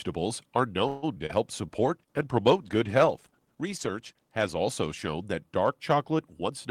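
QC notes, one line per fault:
0.87–1.31 s, repeated packet loss (robotic sound): four dropouts land in under half a second, and the receiver papers over each by stretching the last bit of speech. About 194 ms gets filled that way and roughly 60 ms is just gone. The longest hole runs 152 ms. With close to half that stretch concealed, the speech comes out choppy and robotic.
1.80–5.41 s, call bitrate drop: the speech loses its sparkle and goes rough and watery, with the top end duller. That fits the encoder being told to roughly halve its rate, something like 32 kbps down to 16 kbps. It has to code coarsely and trim the highs to fit. The worst of it lasts about 2.8 s.
6.45–6.70 s, jitter buffer speed-up: right at the tail the speech suddenly sounds hurried, about 115% speed, but the pitch stays put. The receiver was sitting on more buffered audio than it wanted and trimmed it by cutting out short pitch-period slices, around 50 ms in total over this bit. 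Because whole cycles are removed rather than the audio being resampled, you get rushing without any chipmunk effect.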